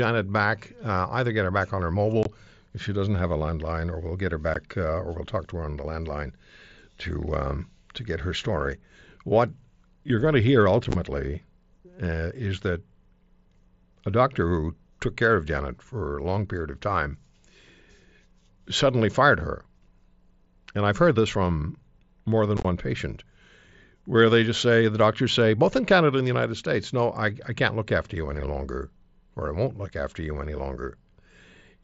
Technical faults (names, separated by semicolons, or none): unconcealed Bluetooth headset packet loss